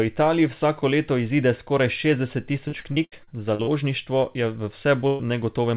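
From 2.68 to 3.70 s, packets were lost or arrived late again and again: seven separate gaps, the longest 73 ms, each patched by extending the preceding sound. About 30 percent of that stretch is concealment, so the speech turns choppy, with pieces dropped out. This is repeated packet loss.

At 5.07 to 5.22 s, a burst of packet loss removed about 120 ms in one run. The receiver stretched the last sound across the hole and faded it rather than leaving silence, and the speech resumes further on with that portion gone. Throughout, nothing reaches above 4 kHz, which fits a narrowband telephone codec on the call path.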